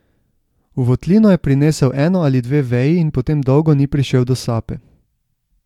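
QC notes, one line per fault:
No faults heard anywhere in this speech clip.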